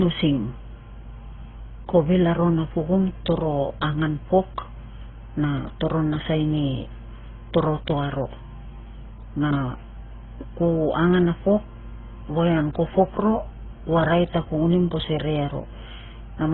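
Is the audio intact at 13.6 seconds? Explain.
No, not at 13.6 s. That moment sits inside a fault running through the whole clip: transcoding between lossy codecs. The speech has nothing above 4 kHz, so it sounds dull. On top of that you get two kinds of codec grit at once, the artefacts of both codecs heard together. That's likely a low-bitrate AAC pass re-encoded to Opus, with Opus spending its bits on AAC's artefacts and keeping the lower cut-off.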